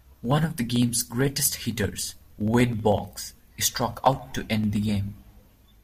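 From 0.06 to 5.78 s, periodic USB or driver dropouts skip about half a millisecond every 63.5 ms, giving evenly spaced ticks in the speech, unlike randomly timed clicks.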